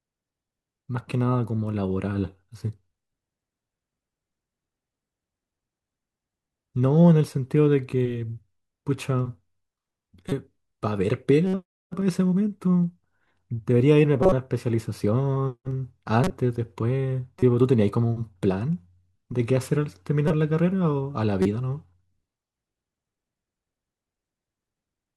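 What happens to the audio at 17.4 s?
A brief glitch cuts through the speech from 17.38 to 17.43 s: a corrupt frame decoded, where a few damaged compressed frames were played with misread data.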